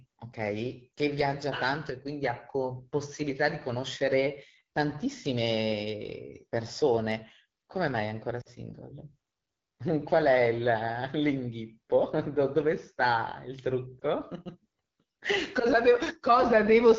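Throughout, the speech carries the rough, raspy texture of the AMR wideband (HD Voice) codec at a low rate, which fits the 8.85 kbit/s mode. Harmonics above 6.4 kHz give way to a smooth noise band on a spectrogram, and fine detail below looks smeared.

At 0.95 to 0.98 s, 8.41 to 8.48 s and 14.00 to 14.03 s, lost AMR speech frames cause the decoder to repeat its last settings at falling gain. The first and last are each a brief dip or warble, showing as a shallow notch in the waveform envelope. The middle one is longer, which fits two lost frames, and drops to near silence.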